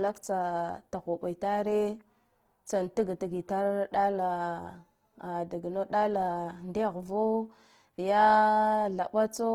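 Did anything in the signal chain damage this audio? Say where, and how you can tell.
Yes. The damage sits at the codec stage and runs through the whole speech clip. Plainly audible Opus compression is the likely cause. The bandwidth stays wide, with content up to about 20.2 kHz, so nothing sounds muffled. Instead the tones turn rough, grainy and noisy. When bits run short, the encoder keeps each band's energy and fills the detail with folded or noise content. That points to Opus music mode at a low rate near 16 kbps.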